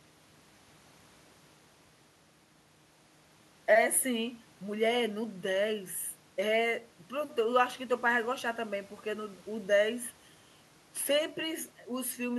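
No technical fault can be heard anywhere in the recording; the signal stays steady and intact throughout.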